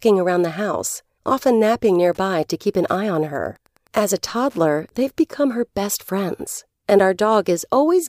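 A speech recording with a faint, steady ticking, about ten clicks a second, running under the speech from 2.11 s, just after "house often napping", to 5.32 s, ending before "her best friends and". The ticks sit about 40 dB below the speech. This is Wi-Fi interference: a nearby Wi-Fi radio's beacon, sent every 102.4 ms, was picked up and rectified by the audio circuitry, so each transmission became an audible click.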